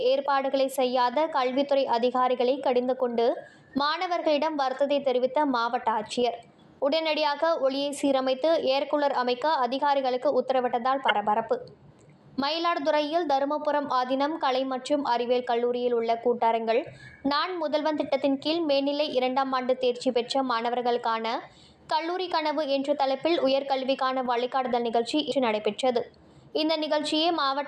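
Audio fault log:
11.08–11.11 s and 25.28–25.32 s, damaged data in a compressed stream: two brief bursts, about 24 ms and 42 ms long, where corrupted bytes reach the decoder, which misreads the affected frames and loses sync until it locks onto the next valid frame header. They sound like a chirp, squawk, click or short hole.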